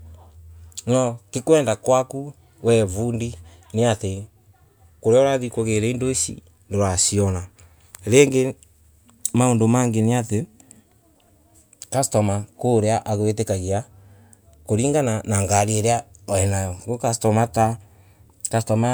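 No audible technical faults.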